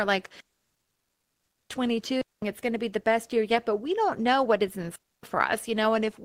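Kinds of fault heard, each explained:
Digital wireless dropout: the radio link loses too much data, so the receiver mutes with a very fast fade. The speech drops into clean near-silence, with no noise burst around it, from 0.40 to 1.70 s, 2.21 to 2.42 s, and 4.96 to 5.23 s.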